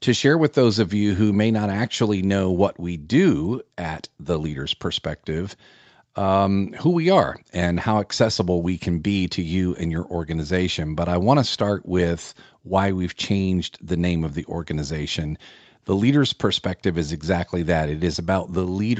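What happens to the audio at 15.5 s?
At 15.5 s the speech carries on intact, with no dropout, click, distortion or other fault, only the steady band-limited sound of call microphone processing, which trims the deepest bass and has nothing above 8 kHz.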